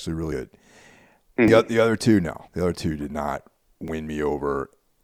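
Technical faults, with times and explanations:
0.32 s, 1.48 s, 2.48 s and 3.88 s: a dropped buffer (overrun) each time. The speech jumps forward with no gap, losing roughly a tenth of a second at 0.32 s and 2.48 s and a few hundredths at the others. This is likely samples being overwritten before they were read. The waveform shows a hard discontinuity, and the spectrogram shows a thin vertical broadband line.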